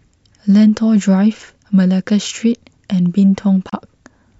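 In this speech clip, the sound briefly cuts to silence from 3.70 to 3.73 s and then resumes. This is a digital broadcast dropout: about 32 ms of audio, which fits a single lost frame, is missing while the receiver muted.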